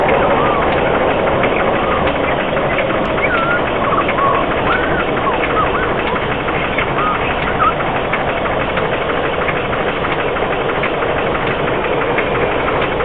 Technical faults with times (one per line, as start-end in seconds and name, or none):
0.00-13.04 wrong sample rate